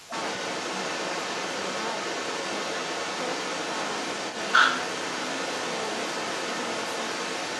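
From the start of the clip to its end at 7.6 s, the echo canceller likely failed to remove the far end's loudspeaker sound from the microphone, so the other side's voice leaks through, sitting roughly 5 dB louder than the talker, as a second voice throughout.

Between 0.06 and 0.1 s, with both sides talking at once, the echo canceller likely could not separate the talker from the echo and turned both down, causing speech suppressed in double talk: a brief dip of about 5 dB lasting around 40 ms.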